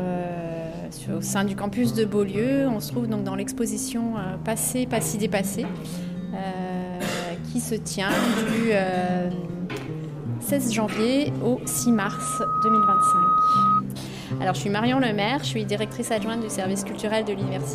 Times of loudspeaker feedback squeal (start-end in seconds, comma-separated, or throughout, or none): 11.64-13.82